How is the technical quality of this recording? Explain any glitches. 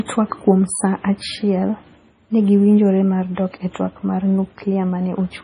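The quality is limited throughout by low-bitrate audio saved at a high bitrate. All of the speech stops abruptly near 10.6 kHz, and a swirly, smeared coding texture stays on the audio the whole way. This is likely an MP3 first squeezed to something near 24 kbit/s and then re-encoded far higher. On a spectrogram there is a hard, flat ceiling at about 10.6 kHz with blurry patches below, which the larger file cannot restore.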